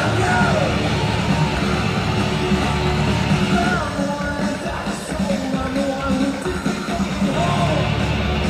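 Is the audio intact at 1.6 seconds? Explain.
Yes, the audio is intact at 1.6 seconds, with no dropout, click, distortion or other fault at that moment.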